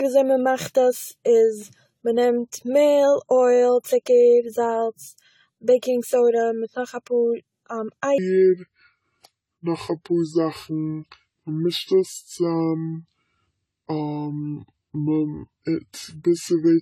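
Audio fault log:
throughout, generation loss: The speech sounds swirly, smeared and hollow, with blurred consonant attacks and a watery shimmer beyond what one encode would give. This likely comes from repeated lossy re-encoding, around seven passes, each re-quantising on a shifted frame grid. The character points to AAC-LC at roughly 64 kbit/s.
8.18 to 16.81 s, section at the wrong speed: From 8.18 s to the end the speech turns deep, slow and dragging, dropping about seven semitones. The section plays at 0.689 times its recorded speed, so pitch and tempo fall together, likely from a player or edit running on the wrong clock.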